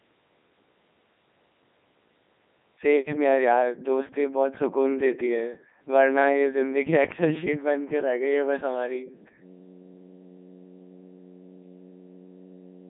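Speech run through a Codec 2 vocoder the whole way: robotic, buzzy resynthesis squeezed into roughly 200 Hz–3.6 kHz, nothing above 3.8 kHz, which fits Codec 2 at 3.2 kbit/s.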